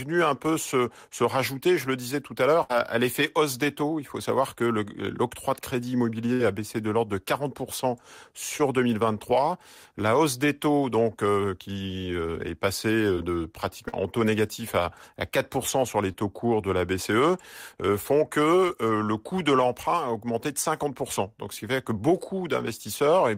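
At 2.63 to 2.71 s, between "le disais tout à" and "l'effet hausse des taux", a burst of packet loss drops about 60 ms of speech. The receiver extends the last sound for roughly 58 ms and fades it, giving a brief held buzz or fading hiss before the speech resumes with that stretch gone. The same happens at 6.33 to 6.42 s, after "que l'octroi de crédit" and before "a baissé de l'ordre", with about 63 ms of fill covering 60 ms of missing audio.

Short concealed packet loss follows at 8.58 to 8.61 s, 13.88 to 13.94 s, 16.12 to 16.16 s and 18.68 to 18.85 s, the last just before "coût de l'emprunt". Each is a 20 to 40 ms hole that the decoder patches by continuing the preceding sound's pitch or noise and then crossfading back, which is heard as a small smear or wobble. At 18.68 s the patch also adds a small amount of extra time.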